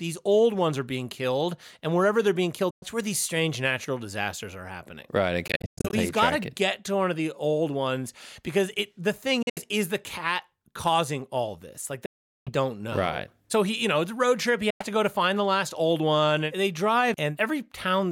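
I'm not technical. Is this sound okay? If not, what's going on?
No. Something likely went wrong in the wireless link to the headphones, a Bluetooth dropout: chunks of the sound didn't arrive in time and were thrown away. You hear the speech cut to sudden silence, then pick up further along, with the missing part simply gone. It happens five times: 2.70–2.86 s, right after "wherever they're being killed"; 5.48–5.94 s, in broken-up bits before "he's got to get"; 9.42–9.60 s, just before "is the cat causing"; 12.06–12.51 s, the longest gap; and 14.70–14.87 s.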